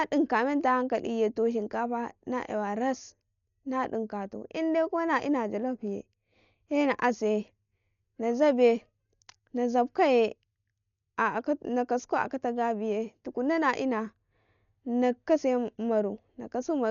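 From start to finish the speech sounds dull and rough, with a grainy, fluttering noise clinging to the voiced sounds. The likely cause is heavy Dolby Digital compression: at a rate that fits roughly 48 kbps, the encoder cuts the band and leaves many frequency lines without mantissa bits, so the decoder fills them with dither noise. On a spectrogram, energy stops abruptly at 6.9 kHz, and patchy speckled noise surrounds the harmonics below.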